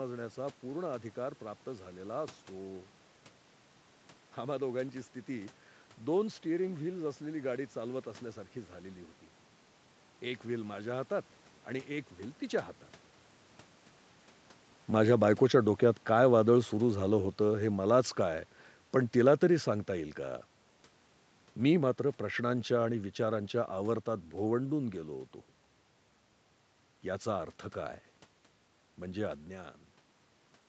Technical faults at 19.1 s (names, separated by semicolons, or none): automatic gain falling